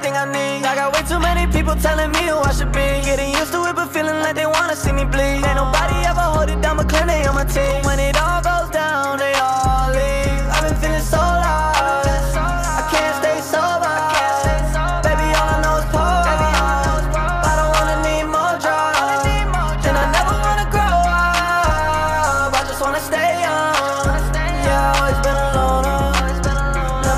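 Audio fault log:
3.40 to 3.49 s and 7.34 to 7.71 s, loose connector crackle: two irregular bursts of scratchy crackle, the first a brief flicker of about 90 ms and the second a longer stretch of roughly 0.37 s. A worn or dirty contact is making and breaking as it shifts, chopping the signal on and off many times within each burst. Any DC sitting on the line turns each break into a small pop, which is why the bursts sound rough and uneven.
19.96 to 20.04 s, chunks out of order: a short jumbled moment, lasting about 80 ms. A 20 ms chunk of audio arrived or was written late and plays three chunks after its proper place, behind the material that should have followed it. Nothing is missing, but the sequence is scrambled, with three hard joins where the mismatched pieces meet.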